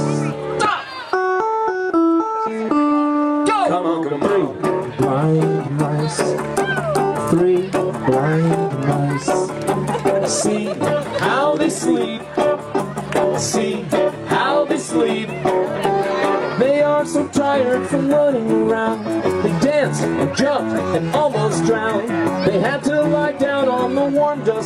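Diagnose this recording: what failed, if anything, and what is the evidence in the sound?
Adaptive stream at a lower bitrate, from 10.88 s to the end of the clip. This is a network-driven codec switch. The connection slowed and the player moved to a cheaper rendition without a gap. At 10.88 s the top end abruptly thins and takes on a synthetic, swirly sheen, and coding artefacts become audible. That sound fits a step down from full-band AAC at around 96 kbit/s to HE-AAC at around 32 kbit/s, where the treble is rebuilt by spectral band replication.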